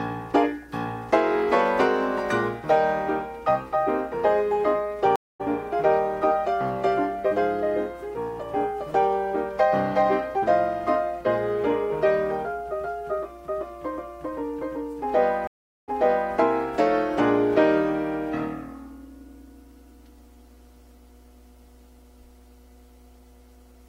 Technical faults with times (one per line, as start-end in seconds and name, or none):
5.16-5.41 stream reconnect
15.47-16.34 stream reconnect